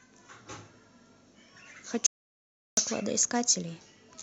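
At 2.06 s the speech cuts off abruptly, mid-flow. What follows is an audio dropout to silence lasting about 0.71 s, until 2.77 s. The gap is silent. No room tone or background hiss remains underneath. The speech then resumes just as suddenly. The likely cause is a brief loss of the input signal, with the recorder continuing to write silence. Whatever was spoken in that stretch is lost.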